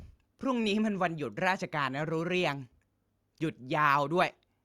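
No technical faults are audible.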